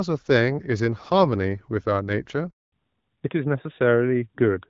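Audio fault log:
2.50–2.72 s: handover gap. The speech cuts off and a hole of about 220 ms follows while the call is passed from one network to the next. No speech frames reach the receiver during the switch, so the sound fades out within a few tens of milliseconds and stays silent until the new link starts delivering audio. Whatever was said inside that window is simply gone rather than delayed.
2.72–4.70 s: fallback to narrowband. From the moment the new link resumes, the call is carried by the older narrowband codec instead of HD Voice. This sounds like AMR-NB at 12.2 kbit/s, whose band stops at 4 kHz, taking over from AMR-WB at 12.65 kbit/s. The speech turns duller and flatter, with sibilants and breathy detail missing, because nothing above 4 kHz survives.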